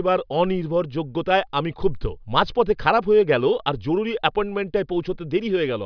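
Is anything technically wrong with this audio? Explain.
No, nothing stood out as technically wrong when listening to this speech recording.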